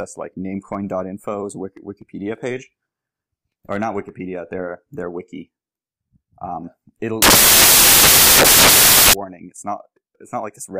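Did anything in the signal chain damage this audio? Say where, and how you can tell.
Yes: samples built from the wrong bytes, from 7.22 to 9.13 s, a sample-format conversion fault. Misassembled bytes turn the low bits into loud, harsh broadband noise and a full-band spectrogram smear.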